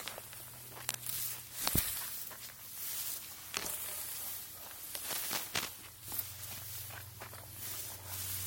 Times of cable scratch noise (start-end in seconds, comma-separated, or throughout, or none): 0.81-0.97, 5.04-5.69